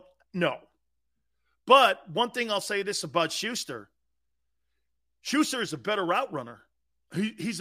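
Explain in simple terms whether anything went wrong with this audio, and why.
Nothing went wrong: no technical faults turn up anywhere in the speech recording.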